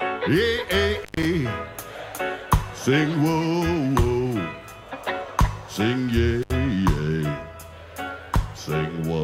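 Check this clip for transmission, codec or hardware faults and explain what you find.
Two intermittent contact faults: at 0.97–1.25 s (open about 126 ms) and 6.42–6.51 s (about 68 ms), a loose connection drops the sound, with crackle at the edges and faint hiss while the line is open. The waveform shows a near-flat gap bounded by spikes, and the spectrogram shows dark bands with bright vertical streaks at each edge.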